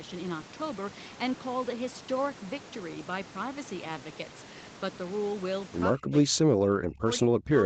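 From 5.95 s to the end, the speech dips by up to about 40 dB. This is likely speech suppressed in double talk, with the echo canceller treating it as echo.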